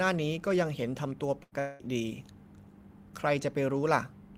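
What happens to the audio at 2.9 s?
Nothing goes wrong at 2.9 s; the speech there plays through intact, with no dropout, click, distortion or other fault.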